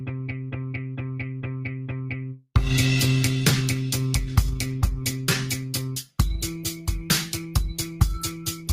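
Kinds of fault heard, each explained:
Noise suppressor applied to music or sounds: A speech-tuned suppressor stays active on non-speech audio, treating sustained and ambient content as noise. Level swings of around 10 dB make held sounds and tails sink and flutter while attacks pass. Unlike compressor pumping, it follows steadiness, not loudness.
Sound cut by the noise suppressor: From 0 to 2.45 s the suppressor judges this sound as noise and pulls it down further, by about 4 dB at its deepest. Decays shorten and steady parts thin while onsets survive. Unlike a dropout, the sound dips without ever vanishing.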